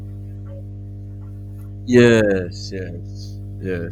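A steady low drone at 50 Hz sits under the speech for its whole length, roughly 15 dB below it: mains hum, from a ground loop or nearby transformer.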